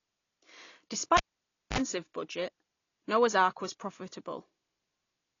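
AAC compression runs through the whole clip from 0 s. Nothing is present above about 7.1 kHz, so the speech sounds dull and closed-in, and the codec damage is plainly audible as a smeared, warbling texture with fizz on sibilants. This is likely AAC-LC encoding at a low bitrate, around 32 kbps, where the encoder lowers its cut-off and coarsely quantises the remaining frequency bands, leaving gaps that smear.

A cable pulled and plugged in occurs from 1.17 s to 1.78 s. A pop marks the moment the live lead comes out, followed by about 0.56 s of near silence. As the plug goes back in, the tip alone makes contact first, letting in a roughly 48 ms burst of 50 Hz mains buzz. A second pop sounds when full contact restores the signal at 1.78 s.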